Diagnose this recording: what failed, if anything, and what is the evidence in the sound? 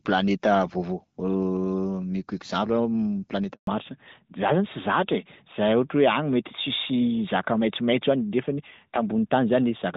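A handover gap at the network stage opens at 3.53 s and lasts 140 ms, to 3.67 s. The speech fades out within a few tens of milliseconds, then nothing arrives until the new link starts carrying frames. On the waveform this is a short taper into a flat line; on the spectrogram, a clean vertical band of silence across all frequencies. Whatever was said during those 140 ms is gone, not delayed.

The call then falls back to narrowband, a codec-stage change that holds from 3.67 s to the end. Before the switch the speech reaches up to about 7 kHz, which fits AMR-WB HD Voice at around 12.65 kbit/s with only light coding roughness. After it, nothing survives above 4 kHz, which points to AMR-NB at about 12.2 kbit/s. The spectrogram shows the upper region cut off as if by a ruler, and the speech sounds duller and rougher.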